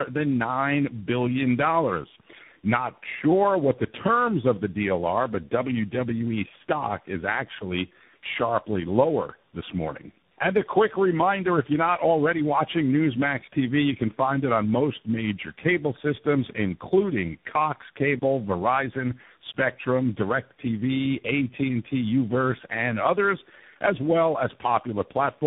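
A speech recording shows tandem speech coding for its whole length. The sound has passed through three speech codecs in succession: G.723.1 at 6.3 kbit/s, then AMR-NB at 7.4 kbit/s, then CVSD at 64 kbit/s, joined by G.711 links. Each coder re-encodes the previous one's damage, so the voice is rough, muffled and warbly. On a spectrogram, energy stops at 3.8 kHz, and the harmonics look smeared and patchy. At 18.19 s there is an underrun with held sample lasting 30 ms, until 18.22 s. The output ran dry and the converter froze on its last value. The waveform shows a flat, horizontal segment, and the spectrogram shows a brief blank band. The sound drops out almost silently, but about 30 ms of audio was skipped before playback resumes at 18.22 s.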